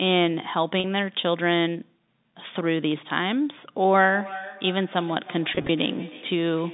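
Packet loss with pitch repetition at 0.80 to 0.84 s: 40 ms of audio went missing, and the receiver bridged it by repeating the last pitch period, giving a brief, slightly held, buzzy tone before the sound resumes.

Feedback echo between two devices from 4.13 s to the end: a second device in the same room replays the call, its microphone picks that up again, and the echo canceller misses it. The sound returns about a third of a second later, thin and ringing, peaking about 18 dB below the direct sound.

Packet loss with pitch repetition again at 5.55 to 5.69 s: 80 ms went missing in short gaps, none longer than 20 ms, scattered over 140 ms. Each gap is filled with repeated pitch periods, producing a slightly held, buzzy stretch.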